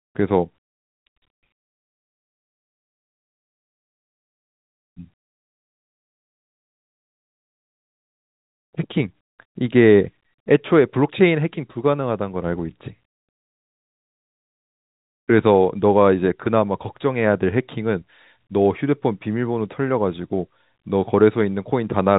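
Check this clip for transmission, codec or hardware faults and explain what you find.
No faults can be heard anywhere in this speech.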